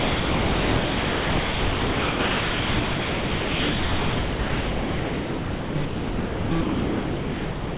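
From the start until 5.75 s, the everyday sound is replaced by a steady, featureless hiss. It returns only briefly before giving way to the same noise again from 5.85 to 6.51 s and from 6.61 s to the end. This is sound dropped by the voice detector, likely because it judged the material to be background and stopped sending while comfort noise filled the gaps. The brief returns carry nothing above 4 kHz, which fits a narrowband telephone codec.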